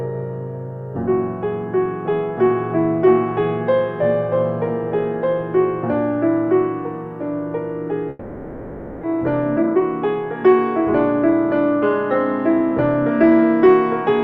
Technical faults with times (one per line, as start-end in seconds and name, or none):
8.09-9.05 long network dropout
9.14-11.94 jitter buffer speed-up